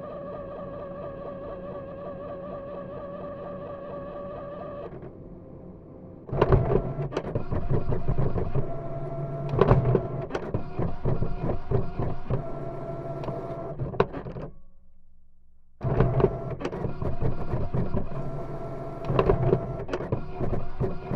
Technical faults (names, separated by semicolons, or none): overlapping chunks